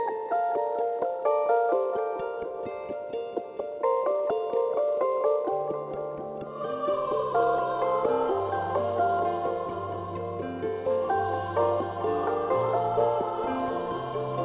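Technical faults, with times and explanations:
No technical faults are audible.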